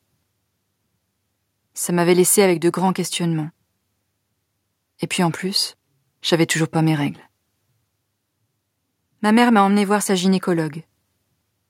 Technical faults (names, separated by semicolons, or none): none